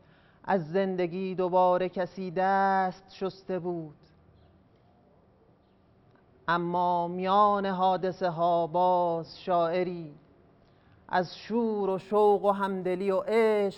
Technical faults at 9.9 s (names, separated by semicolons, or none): none